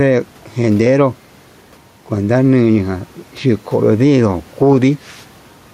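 Gain pumping runs through the whole speech clip, with the gain swinging by roughly 5 dB; the room noise sits about 35 dB below the speech. The likely cause is excessive microphone gain with a fast limiter clamping each peak, leaving the dynamics squashed.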